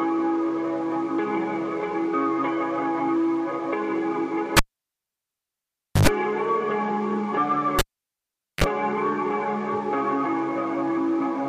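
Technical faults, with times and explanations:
4.57–6.07 s and 7.79–8.64 s, cable pulled and plugged in: a live lead is pulled and reinserted, giving a pop, about 1.46 s and 0.80 s of near silence, then 50 Hz mains buzz (95 ms, 31 ms) while only the tip touches, and a second pop.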